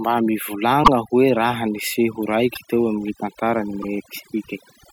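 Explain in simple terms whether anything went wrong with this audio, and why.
Two things went wrong. The whole clip suffers from overdone noise removal. A noise-cleaning tool was set far too strong. It treated parts of the sound as noise and switched them off, and it took the quiet edges of the speech with them. So the pauses fall to near silence, with twinkling specks left behind.

There are also repeated frames at 0.83 s, 2.53 s and 3.81 s. Each time, one short chunk of about 24 ms was stored or sent twice. The player simply played that same sliver again. You hear it as a tiny stutter or hiccup in the speech. Each repeat makes the clip about 24 ms longer.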